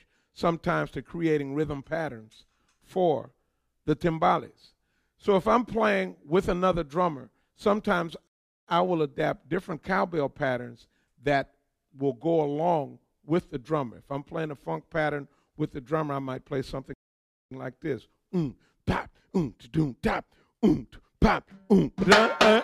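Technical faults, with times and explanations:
8.27 to 8.68 s and 16.94 to 17.51 s, playback stall: the sound cuts to silence mid-flow for about 0.4 s, then about 0.58 s, before continuing. The player likely ran short of buffered data or had its output thread blocked, leaving nothing to send until it recovered.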